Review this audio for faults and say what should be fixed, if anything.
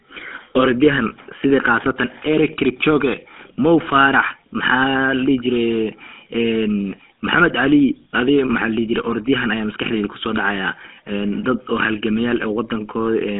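GSM full-rate codec damage runs throughout the speech: a buzzy, gravelly roughness from regular-pulse excitation, a narrow 250 Hz to 3.5 kHz band, nothing above 3.8 kHz, consistent with 13 kbps. Prevent it by capturing or routing audio over a wideband path instead of a GSM call.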